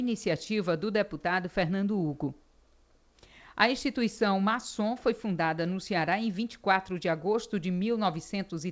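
No technical faults can be heard anywhere in the recording. It has passed through a WebRTC call path whose codec leaves nothing above 8 kHz, which fits G.722 running at 64 kbps, so the top end stops there.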